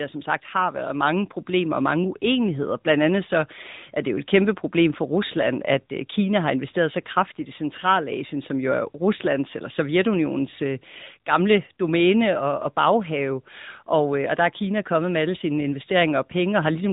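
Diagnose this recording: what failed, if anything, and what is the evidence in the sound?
AMR narrowband mobile codec, present throughout the speech. The stage is the codec. The evidence is a hard ceiling in the spectrum: nothing above about 3.8 kHz survives at any point, so sibilants and consonant detail are dulled. The coding damage is plainly audible, which fits one of AMR-NB's middle modes near 10 kbps. At 8 kHz sampling, the voice is rebuilt every 20 ms from a vocal-tract model excited by a sparse set of pulses. The fine texture between those pulses is lost.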